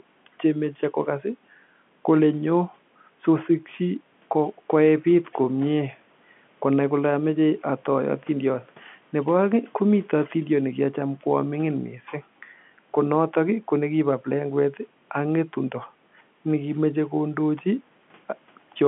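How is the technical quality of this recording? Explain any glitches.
Nothing stood out on listening: the speech comes across as an ordinary telephone-band recording, consistent with G.711 coding, with no glitches to point to.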